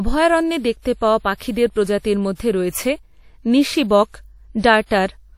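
Throughout the speech, washy ringing and hiss that breathes with the signal point to likely WMA compression near 48 kbps; a spectrogram shows a hard ceiling at 16.5 kHz with patchy holes.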